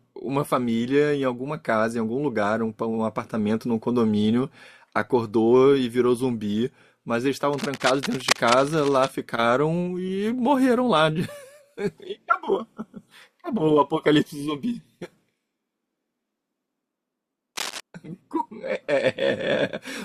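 Speech with cable scratch noise from 7.53 to 9.11 s and again from 17.56 to 17.80 s: bursts of scratchy rustling about 10 dB below the voice, likely from a worn cable or connector being moved. They show as ragged broadband smears on a spectrogram and dense, jagged spikes on the waveform.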